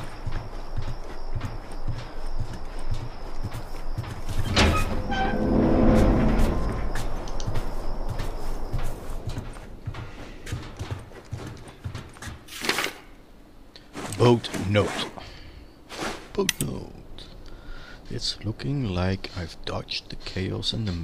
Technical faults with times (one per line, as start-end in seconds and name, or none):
none